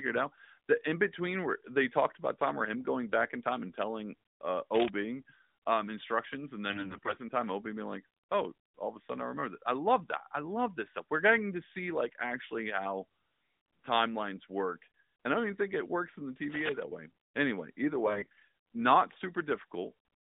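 AMR bit errors strike twice, from 6.70 to 7.18 s and from 18.06 to 18.46 s. Over the narrowband AMR link, the weakly protected bits of the speech frames arrived corrupted, roughly a fifth of them in the first burst and a few percent in the second. The checksum still passed, so the decoder used misplaced excitation pulses and skewed pitch, gain and spectral detail. The speech keeps its rough pitch and loudness but turns hoarse and gargly, most harshly in the first burst.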